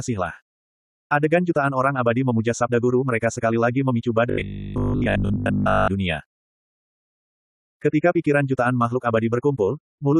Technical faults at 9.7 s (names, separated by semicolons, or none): none